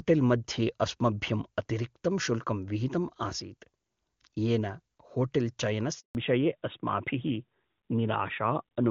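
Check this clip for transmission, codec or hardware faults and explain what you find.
Two faults: a handover gap, then a fallback to narrowband.

At 5.99 s there is a handover gap. The call switches networks, no frames arrive, and the speech drops out for 160 ms.

From 6.15 s the call falls back to narrowband. The codec change strips everything above 4 kHz, so the speech turns duller and rougher until the end. Before the switch, the wideband sound points to AMR-WB near 23.85 kbit/s with faint or no codec damage.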